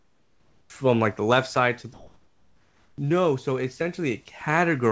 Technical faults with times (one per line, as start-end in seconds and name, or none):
0.00-0.70 comfort noise in place of the background
1.94-2.98 comfort noise in place of the background